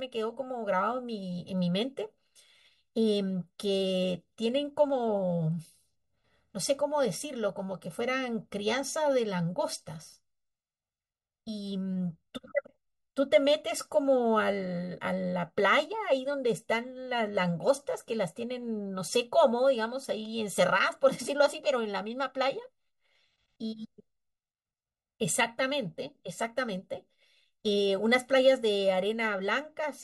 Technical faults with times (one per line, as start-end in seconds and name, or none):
0.00-30.04 channel delay (comb filtering)